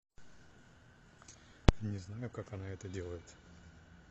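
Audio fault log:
0.00–2.61 s adaptive stream starting at a low bitrate: thin, synthetic-sounding treble and smeared speech until a sudden, gapless jump in clarity, as playback moves from a very low-bitrate version to a better one.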